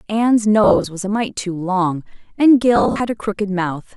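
Around 0.64 to 0.86 s, and again from about 2.76 to 3.00 s, the speech breaks up from lost LE Audio frames. The drops are scattered rather than solid, with short runs of a few tens of milliseconds, which fits 10 ms LC3 frames going missing. For each gap the decoder repeats the last spectrum with scrambled signs, so the voice turns into a brief noisy, smeared hiss. The second patch is slightly longer, with 16 frames lost against 13.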